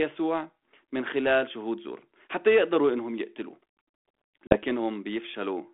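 Around 4.47 to 4.6 s, packet loss on an ADPCM call cuts roughly 40 ms to abrupt silence. The decoder's predictor and step size then fall out of step with the sender's, so speech resumes slightly distorted before settling.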